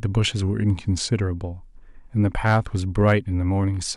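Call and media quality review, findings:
Drift correction step, likely from clock-matching software changing playback rate in one jump to manage its buffer. 0.42 to 1.11 s: speech slows by 5.4% and drops 95 cents, nearly a semitone, then snaps back to normal speed and pitch.

Hard clipping: signal exceeds a gain or conversion stage, peaks cut flat. 2.46 to 2.57 s, overdriven by about 5 dB; 3.01 to 3.14 s, by about 3 dB.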